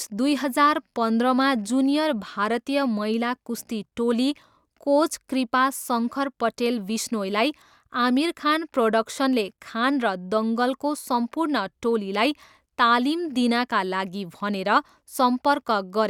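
No technical faults are audible anywhere in the recording.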